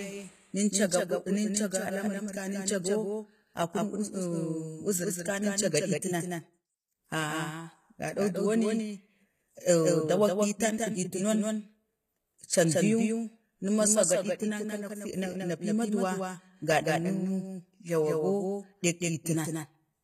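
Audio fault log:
Throughout: doubled audio track. A second full-band copy of the speech trails the original by about 200 ms, roughly 5 dB quieter. It has no decay or room colour, so it sounds like a clean, detached repeat rather than an echo. This is likely the same audio captured a second time through a slower path, or an edit holding two copies out of step.
Throughout: HE-AAC compression. The codec damage is plainly audible. The top end is rebuilt by spectral band replication, copying lower bands upward under a coarse envelope, so the treble isn't the real thing and harmonics don't line up across the crossover. S sounds come out gritty or lispy, and nothing reaches above 14.9 kHz. The sound fits a low bitrate around 20 kbps, which is likely where it comes from.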